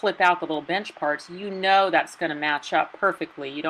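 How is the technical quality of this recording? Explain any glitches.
Nothing in the recording stood out as a technical problem on listening, so there are no glitches to explain.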